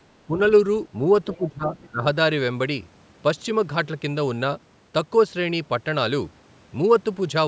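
Speech, passed through a call's microphone chain with nothing above 8 kHz. From 0.27 to 0.4 s the voice dips slightly, by about 5 dB. From 1.31 to 2.04 s it sinks much further, by up to about 20 dB. Both dips point to speech suppressed in double talk: the echo canceller likely couldn't tell the talker from the far end playing over the loudspeaker, so it turned everything down. During that second dip, faint scraps of the other side's voice leak through, from 1.33 to 1.5 s at around 20 dB below the speech and again from 1.8 to 1.86 s, fainter still. That's likely far-end audio from the loudspeaker that the canceller didn't fully strip from the microphone.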